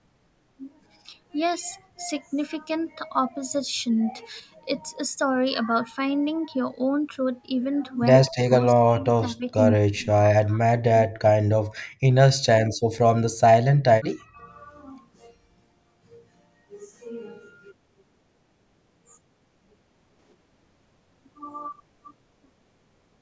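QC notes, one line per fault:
4.40–4.52 s, sudden gain jump: level and background drop together by about 6 dB with no ramp, likely a gain step applied between adjacent samples.
8.28–9.58, 9.76–10.64 and 10.81–11.88 s, speech suppressed in double talk: the talker dips and breaks up in pieces, down by roughly 30 to 40 dB, likely the echo canceller mistaking it for echo.
12.71–12.83 s, background gated by the echo canceller: room sound briefly drops out by about 31 dB for around a tenth of a second while the loudspeaker is playing, then returns.
13.29–13.41 and 14.01–14.45 s, speech suppressed in double talk: short chopped dips of roughly 30 to 40 dB, likely the canceller again clamping the near talker during overlap.
20.19–20.33 s, sudden gain jump: sound and noise floor step up together by about 6 dB in one sample, likely an unramped gain change.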